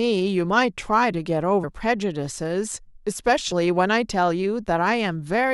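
Compressed frames skipped at 1.63 s and 3.51 s: the speech jumps ahead about 150 ms, then about 70 ms, consistent with dropped 23.2 ms frames.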